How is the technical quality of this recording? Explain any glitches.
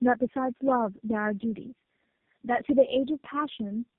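Quality is poor throughout, with tandem speech coding for the whole clip. The speech sounds rough, muffled and warbly, which points to three low-rate speech codecs in a row, each decoding and re-encoding the previous one's output. A spectrogram shows nothing above 3.8 kHz and smeared, unsteady harmonics.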